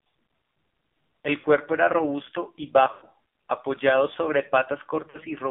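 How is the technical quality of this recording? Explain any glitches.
The recording is poor, heavily coded mobile speech with three dropouts. AMR narrowband mobile codec, throughout: the voice is confined to 200 Hz to 3.6 kHz and sounds buzzy and synthetic, which fits a 5.9 kbps mode. Lost AMR speech frames occur at 1.40 to 1.46 s just before "era robusto y", at 2.92 to 3.06 s between "era robusto y" and "apoyado sobre", and at 5.10 to 5.21 s. In each gap the decoder repeats the last good settings with falling gain. The roughly 40 ms gaps give brief warbly dips. The 100 ms gap stretches the sound and fades it out before the voice returns rough.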